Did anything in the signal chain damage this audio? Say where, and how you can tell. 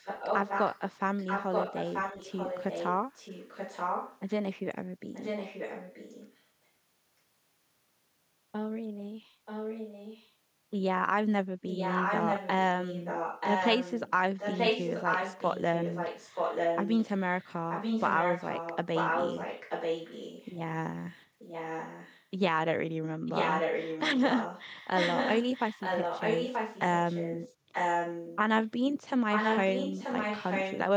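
Yes. Echo leak, at the call-processing stage. A copy of the speech returns 931 ms late at 0–4.3, 5.13–6.42, 9.45–10.32, 11.69–20.58, 21.11–22.25, 23.26–28.38 and 29.32–30.8 s. It sits 5 to 10 dB down in some spans and as loud as the speech in others. A loudspeaker-side echo canceller likely passed its microphone pickup back.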